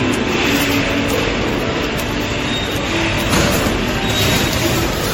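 From the first moment to the end, the sound carries generation loss: that swirly, watery texture and hollow sound, with attacks smeared rather than crisp. The damage is heavier than a single low-bitrate pass would leave, so it's likely been through MP3 encoding around ten times, each pass requantising on a shifted frame grid and stacking up noise and spectral holes. The artefacts fit something like 64 kbit/s, and there's nothing above 16.5 kHz.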